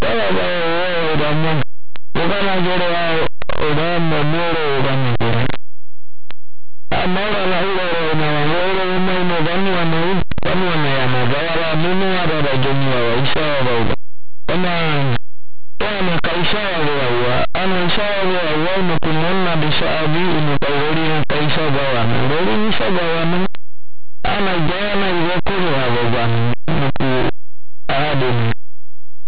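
From start to finish, linear audio read as companded: plain 8-bit samples decoded as mu-law, so values just on one side of zero explode to the largest outputs while those on the other side stay small, giving very loud, harsh distortion. The waveform shows huge, lopsided swings, and the spectrogram shows dense broadband noise smearing the speech.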